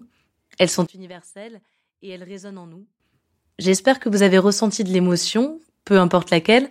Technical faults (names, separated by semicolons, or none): one channel inverted